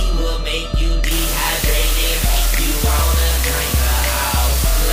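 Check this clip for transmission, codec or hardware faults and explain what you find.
From 1.11 s to the end, a constant, even hiss sits well up against the sound: low bit depth with dither, only 3 bits, with noise added before rounding so the error becomes steady white noise.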